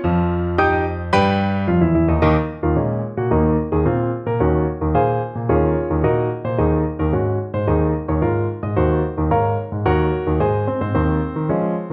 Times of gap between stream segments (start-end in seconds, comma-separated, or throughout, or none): none